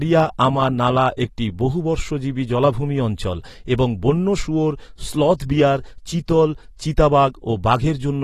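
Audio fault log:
throughout, AAC compression: speech sounds dull and smeared with fizzy sibilants, likely from AAC-LC at a low bitrate near 32 kbps; the spectrogram shows a hard ceiling at 13.9 kHz.
1.17 s, pre-echo: between "আমা নালা" and "একটি বহুবর্ষজীবী জলাভূমি অঞ্চল", block quantisation noise spreads about 15 ms ahead of an attack, appearing as short hiss before the waveform's onset.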